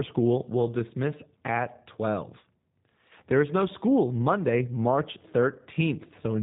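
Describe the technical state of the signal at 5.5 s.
At 5.5 s the speech carries G.729 codec damage, present across the whole clip. The codec rebuilds speech from a vocal tract filter, pitch prediction and sparse pulses, which fits an 8 kbit/s rate. Nothing passes above 3.8 kHz, and the sound is plainly rough and synthetic.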